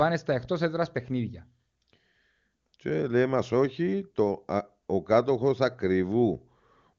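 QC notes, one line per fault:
No faults to note in these QC notes.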